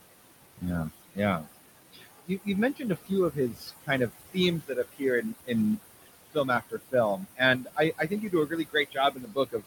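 Throughout the clip, a noise suppressor pulls the room noise down by about 19 dB frame by frame, leaving noise-suppressor artifacts: the noise sinks between the words and rises under them. The room noise itself sits about 11 dB below the speech. From 0.57 to 1.47 s, the suppressor mistakes parts of the speech for noise and cuts them by up to about 20 dB, briefly swallowing roughly a fifth of a second of soft sounds. The same speech cut returns from 1.93 to 5.51 s, with drops of up to about 21 dB over roughly a second and a half, and again from 6.0 s to the end, leaving word endings and quiet stretches faint or missing.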